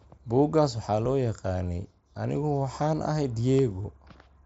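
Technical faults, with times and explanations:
1.06 s, dropped buffer (overrun): a sudden jump in the speech just before "loo yaqaanay", with no gap of silence. About 10 ms of audio is missing, likely because the software failed to read a buffer before the hardware overwrote it, splicing the two sides together.
3.83 s, concealed Bluetooth headset packet loss: just after "waxaan ahay" there is a very short buzzy tone held at full level. Around 15 ms of the wireless link dropped out, consistent with two lost frames, and the receiver filled the hole by repeating the closest-matching recent piece of waveform.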